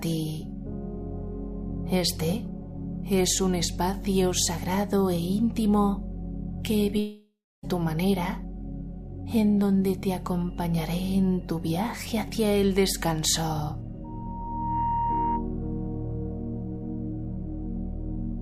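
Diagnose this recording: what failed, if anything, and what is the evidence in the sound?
From 6.99 to 7.66 s the sound dissolves into a fading buzz, then roughly 0.3 s of near silence, and returns with about 640 ms lost. This is most likely a long network dropout, with the receiver's concealment filling the gap. A storage dropout would cut straight to silence, without that fading tail.

Between 14.04 and 15.49 s a single 934 Hz tone swells over about 0.7 s until it is roughly as loud as the rest of the sound. This is loudspeaker feedback squeal: an acoustic loop between loudspeaker and microphone whose gain exceeded one at that frequency. Unlike a steady interference tone, it grows by itself.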